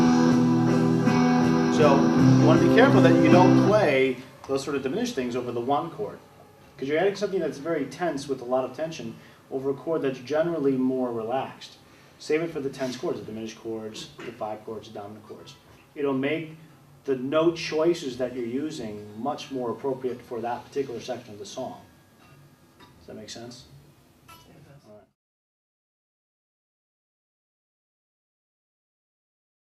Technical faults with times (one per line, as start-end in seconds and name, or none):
none